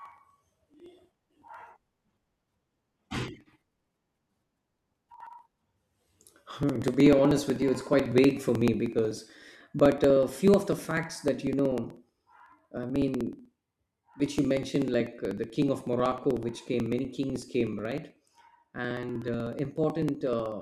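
From 0.06 s to 20.52 s the speech carries periodic USB or driver dropouts: a short gap recurs every 0.062 s, about 16 times per second and around three hundred times in all. Each time something stalls the bus or driver, roughly 2 ms of audio is skipped outright rather than filled with silence, so the waveform jumps across the gap. The result is an even train of ticks that is audible only while the speech has signal.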